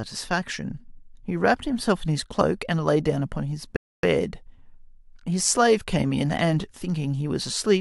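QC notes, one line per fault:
3.76–4.03 s, rebuffering stall: the speech drops to dead silence for about 0.27 s, then picks up exactly where it left off. The player ran dry of downloaded audio and waited for more, so nothing's missing, just that gap added.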